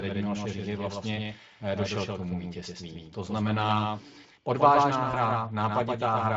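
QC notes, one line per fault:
Throughout: doubled audio track. Every syllable returns as a full-band echo roughly 150 ms later and about 5 dB quieter, with no decay or room colour, most likely a second capture through a slower path. Spectrograms show each onset repeated at a fixed offset, and waveform transients appear in pairs.
5.11–5.19 s: VoIP packet loss concealed by the speech codec, just after "znamená odvážná". The Speex decoder extrapolates its last pitch and filter into a brief fading sound, consistent with one lost 20 ms frame, and the voice stays weak as the prediction recovers. Spectrograms show the concealed stretch dimming, and the waveform shows a shrinking envelope.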